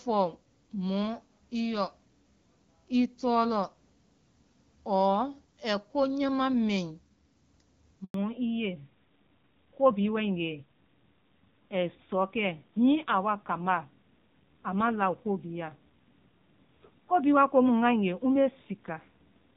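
At 8.04 s there's a handover gap: the call got passed from one network to another, and for about 100 ms, up to 8.14 s, nothing came through. The sound doesn't fade naturally; it drops out within a few tens of milliseconds and leaves a clean hole. Whatever fell in that window is simply gone, because no frames arrived to decode while the link was switching over.

Right after, from 8.14 s to the end, comes a fallback to narrowband. Before the gap the HD Voice codec carries the speech with light damage, at a quality that fits AMR-WB around 12.65 kbit/s. Once the new link settles, everything above 4 kHz disappears, so the airy top end goes missing and the voice turns duller and rougher. That fits a drop to AMR narrowband at a low rate, likely around 7.4 kbit/s.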